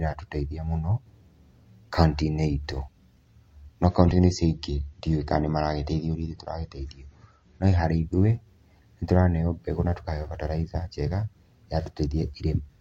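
Adaptive stream at a lower bitrate, 3.84 to 7.84 s: the stream switched to a leaner version of the speech as the connection slowed. Everything above 8 kHz vanishes abruptly and codec artefacts thicken, which fits MP3 falling from 128 to 34 kbit/s, with no gap.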